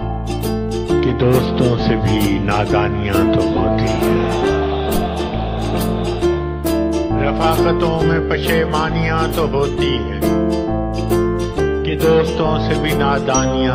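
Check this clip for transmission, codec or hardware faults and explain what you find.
Nothing here points to a transmission, codec or hardware problem, so there's nothing to flag in this one.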